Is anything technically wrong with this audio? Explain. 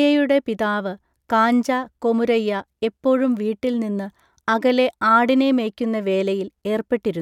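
No, nothing in this speech recording points to a technical fault; the signal holds steady throughout, with no audible break or disturbance in how it was captured or carried.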